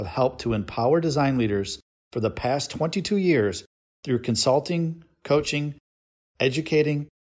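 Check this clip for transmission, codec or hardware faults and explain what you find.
No transmission, codec or hardware fault can be heard anywhere in this speech recording, and the signal stays continuous and stable throughout.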